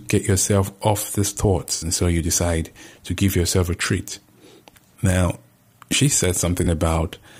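Speech with AAC frame loss with concealment at 1.75–1.85 s and 6.64–6.67 s: brief smeared, phasey patches, not silent gaps or clicks, fitting roughly three lost frames, then one.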